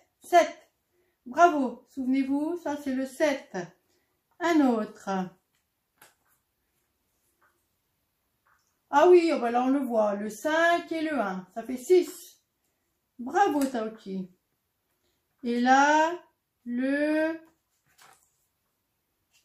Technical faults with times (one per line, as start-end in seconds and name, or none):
none